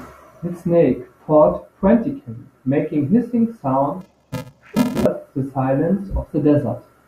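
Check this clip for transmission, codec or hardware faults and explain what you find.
One fault is present. Interleaved audio read as planar, from 4.01 to 5.06 s: each block of alternating left and right samples was split down the middle, with the first half taken as left and the second half as right. Each channel therefore receives one half of the block's mixed left and right samples, played at half speed within each block. With blocks of 128 samples (2.67 ms), the speech turns dull and robotic, with a buzz at 375 Hz and no clear octave drop.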